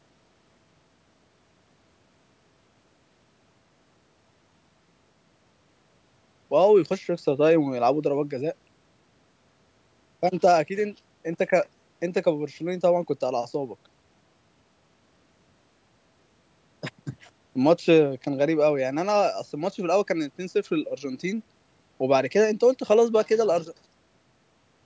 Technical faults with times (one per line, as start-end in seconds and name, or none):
none